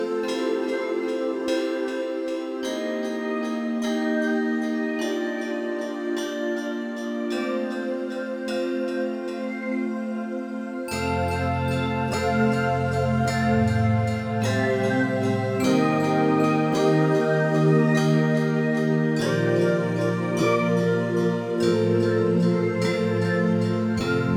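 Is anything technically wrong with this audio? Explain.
No, nothing technically wrong.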